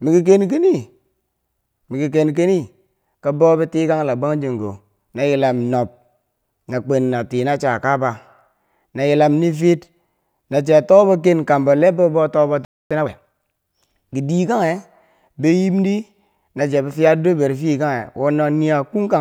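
At 12.65 s the player most likely ran out of buffered data or had its output thread held up, a playback stall that stops the speech in mid-flow. The output drops to silence for about 257 ms, until 12.91 s, long enough to register as a clear break rather than a click. The speech then resumes where it left off, with nothing skipped over.

From 12.91 s to 13.41 s the player works off the backlog that built up during the gap, a time-compressed catch-up. It cuts out short slices of the signal and cross-fades across the joins, so this half second of speech plays at 1.5 times normal speed. The pitch stays where it should be, but the passage sounds rushed.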